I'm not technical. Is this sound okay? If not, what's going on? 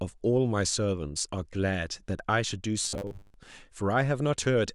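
No. From about 2.83 to 3.35 s the speech turns into a stiff, metallic hum, which is robotic sound from repeated short buffers. New audio was likely arriving too slowly, so the software kept replaying the same tiny 10 ms slice for most of that half second. That looping forces a steady 100 Hz buzz. Unlike a dropout, the sound never goes silent, and the buzz follows the speech only roughly.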